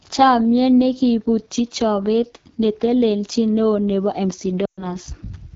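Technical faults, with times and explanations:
Throughout: AMR wideband (HD Voice) codec. The speech sounds rough and raspy from start to end. Plainly audible codec damage points to one of the codec's lowest rates, around 8.85 kbit/s. AMR-WB rebuilds speech from a vocal tract model driven by pulses. At this rate too few bits describe those pulses. Detail below 6.4 kHz turns grainy. The band from 6.4 to 7 kHz is only shaped noise, so the top sounds hissy and loose.
4.65 to 4.96 s: lost AMR speech frames. About 120 ms of speech went missing, which fits a run of six 20 ms frames. The decoder covers the gap by reusing the last good pitch and vocal tract settings. It lowers the gain with each missing frame. The sound drops to near silence within two frames. In wideband this fade is quick. The speech then resumes after the gap.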